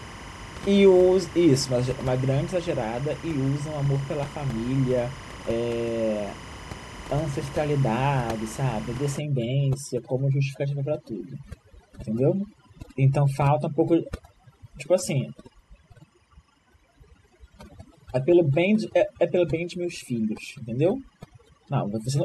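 Timecode bleed runs from start to end: linear timecode at 25 frames per second leaks in, its square wave flipping between roughly 1 kHz and 2 kHz, a chirping warble around 20 dB below the speech. Overdone noise removal takes hold from 9.19 s to the end: the room noise, about 16 dB below the speech, is clamped to near silence with twinkling specks, and quiet speech detail vanishes with it.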